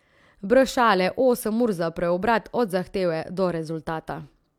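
Listening through the recording, nothing stood out as a technical fault at any point.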